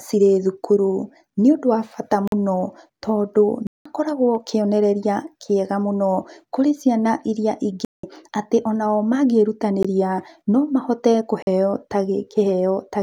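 Blocks of digital silence cut into the speech at 2.28 s (46 ms, right after "nĩ ũndũ wa bata"), 3.67 s (186 ms), 7.85 s (186 ms, between "mũno kũrĩ ciana irĩa" and "atĩ o nao"), 9.83 s (about 18 ms) and 11.42 s (46 ms, after "no mahote"). Each time the audio was replaced by zeros, most likely because the output buffer went unfilled, with four of the lengths fitting 2048- and 8192-sample blocks. The longer ones are audible holes.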